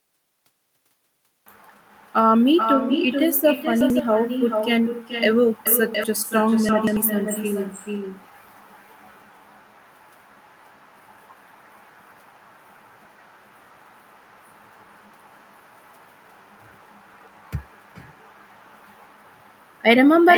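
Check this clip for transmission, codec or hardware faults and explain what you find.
Two faults are present: a speech echo runs through the whole clip, and short stretches play in the wrong order at four points.

Echo with no canceller runs throughout. Each phrase returns around 400 ms later, about 6 dB down and thinner. A far-end loudspeaker is feeding its microphone with nothing subtracting it. The long, distinct delay separates it from room reverberation, which smears rather than repeating.

Chunks out of order occur at 3.81–3.99 s, 5.67–6.04 s, 6.69–6.97 s and 17.18–17.37 s. Blocks of about 93 ms play after the blocks that should follow them, leaving jumbled syllables. Unlike a dropout, nothing goes missing. The sound is only rearranged.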